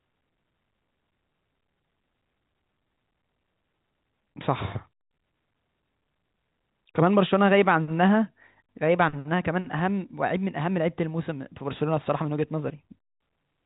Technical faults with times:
none

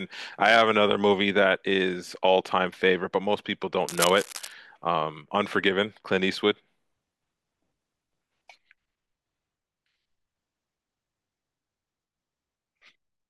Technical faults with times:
3.88-4.53 cable scratch noise

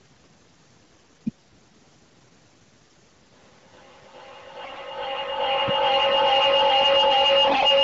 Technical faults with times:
0.93-1.17 AMR bit errors
2.79-3.13 AMR bit errors
3.31-7.84 feedback echo between two devices
4.63-4.78 AMR bit errors
7.47-7.65 AMR bit errors

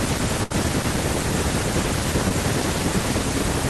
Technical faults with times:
0.43-0.52 burst of packet loss
2.28-2.32 short concealed packet loss

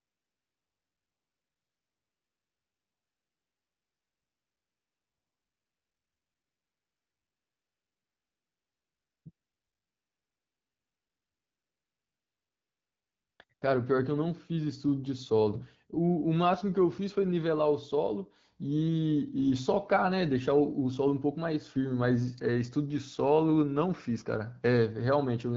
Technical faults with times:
0.00-13.61 AMR comfort noise

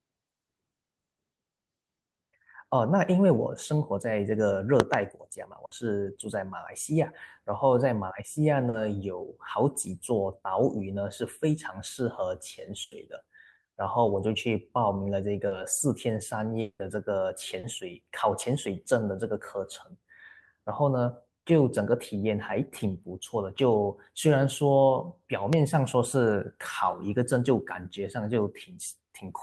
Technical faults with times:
4.80-4.96 loud pop
5.65-5.73 burst of packet loss
8.69-8.75 short concealed packet loss
12.83-12.93 burst of packet loss
15.47-15.53 short concealed packet loss
16.61-16.81 long network dropout
17.59-17.65 short concealed packet loss
25.53-25.55 loud pop

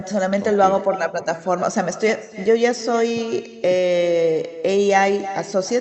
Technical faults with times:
0.00-5.81 echo with no canceller

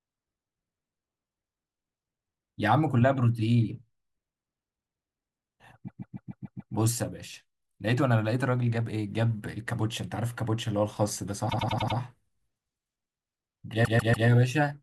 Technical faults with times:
5.87-6.73 repeated frames
11.48-11.96 repeated frames
13.84-14.27 repeated frames

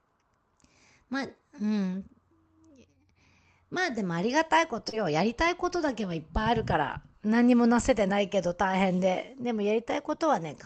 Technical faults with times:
4.89-4.94 short concealed packet loss

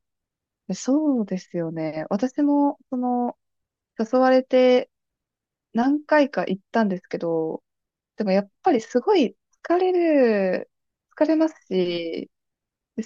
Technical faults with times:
none

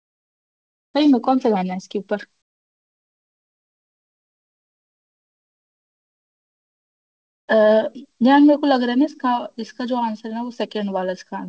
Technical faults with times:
0.00-0.94 comfort noise in place of the background

